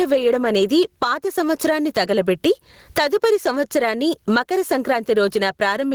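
A speech recording with gain pumping running through all of it, a gain swing on the order of 15 dB, while loud and quiet syllables sit squashed close together in level. The likely cause is input gain set far too high with a fast limiter or compressor clamping each peak. On a waveform the envelope looks flattened and the gaps fill in; a spectrogram shows the noise floor brightening between phrases and darkening under them.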